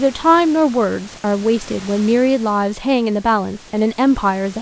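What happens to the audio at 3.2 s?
Nothing goes wrong at 3.2 s: the speech carries on intact through that moment, with no dropout, click or distortion to be heard.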